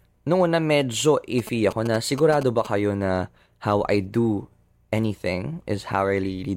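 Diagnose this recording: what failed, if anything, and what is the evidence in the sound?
Analogue wiring rectified GSM signalling bursts from a nearby phone: galloping 217 Hz buzzes from 1.39 to 2.67 s, after "una medyo", about 10 dB below speech.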